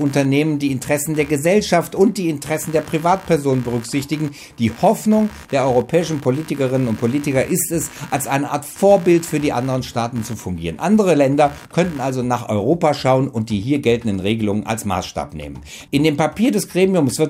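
From the start to about 12.1 s there's computer activity noise, a buzzy chirping pulsing at roughly 70 Hz and sitting around 25 dB under the sound. It tracks the machine's load, not the audio, which points to processor or mouse activity disturbing the audio ground.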